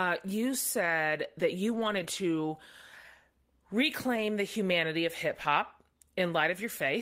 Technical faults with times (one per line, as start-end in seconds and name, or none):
0.81-0.91 lost packet rebuilt from error correction
1.71-2.05 lost packet rebuilt from error correction
4.16-4.22 lost packet rebuilt from error correction